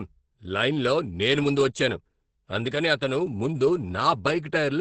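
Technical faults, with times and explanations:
Throughout: Opus compression. The speech sounds muffled and hoarse, with nothing at all above 8.6 kHz. That hard ceiling and the hoarse texture point to Opus running in its speech (SILK) mode at wideband, likely at a very low rate around 12 kbps. At that rate the encoder models the voice coarsely and discards the top of the spectrum, so the damage here is heavy.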